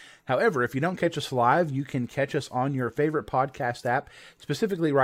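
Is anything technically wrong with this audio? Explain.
No, nothing technically wrong can be heard here.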